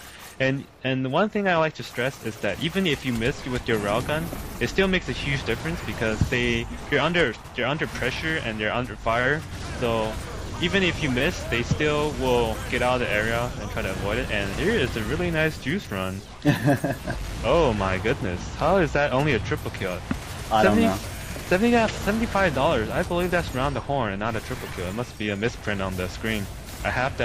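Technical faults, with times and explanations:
No technical faults detected anywhere in the clip.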